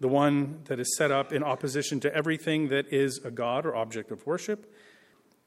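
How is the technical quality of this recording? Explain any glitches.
The recording has one recurring glitch. From 0.22 s to 5.27 s there are clock slip clicks: faint, regular ticks about every fifth of a second, around twenty in all. They are likely caused by two unsynchronised device clocks, with the drift suggesting an error of roughly 100 ppm. Each time the drift reaches a full sample, one sample is dropped or repeated. On a spectrogram these appear as thin vertical broadband lines at even spacing. The waveform shows tiny single-sample discontinuities.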